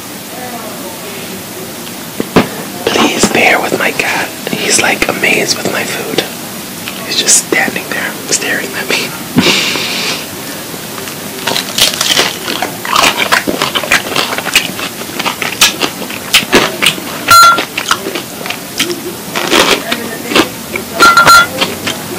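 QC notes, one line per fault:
throughout, hard clipping: a stage overdriven by about 38 dB cuts a few percent of samples flat, and the added high harmonics put a harsh fuzz on every loud sound.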